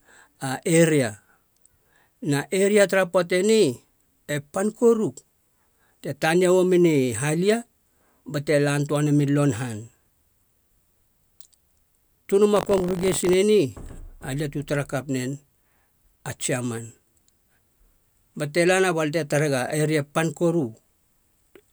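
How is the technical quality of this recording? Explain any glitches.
The recording has one glitch. From 12.54 to 13.35 s there is buffer tearing. The program filling the audio ring buffer and the hardware reading it have drifted out of step, so they cross inside each period. A small slice of every buffer holds speech from one lap earlier, roughly 40 ms old, with hard joins either side. This gives a robotic buzz at 46.9 Hz over the speech, which fits a 1024-sample buffer.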